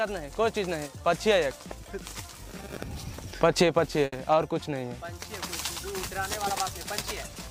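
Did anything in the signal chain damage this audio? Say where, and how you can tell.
Yes, at 4.05 to 4.14 s a sound hangs for 70 ms with a slight buzz or dip: a short stall from a late packet, where the network jitter buffer ran dry, stretched audio, and resumed losslessly.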